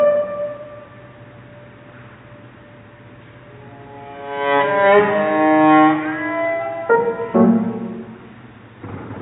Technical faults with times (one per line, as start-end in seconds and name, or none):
none